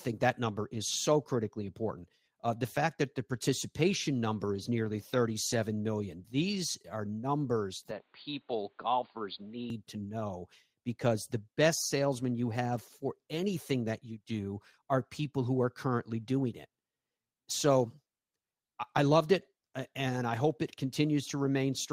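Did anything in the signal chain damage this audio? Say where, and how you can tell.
Yes. In the network and codec stage there are four short lost packets rebuilt from error correction, at 4.58, 4.68, 5.14 and 5.52 s. There's no dropout, but each 20 ms spot turns briefly grainy and noisy. The decoder played the low-bitrate backup copy carried in the next packet instead of the lost original.

From 7.91 to 9.70 s the sound goes dull and narrow, with nothing above 4.7 kHz, and a new noise floor appears roughly 45 dB under the speech. The level holds steady and there's no gap at either edge. That's likely the input switched to a poorer device, at the capture stage.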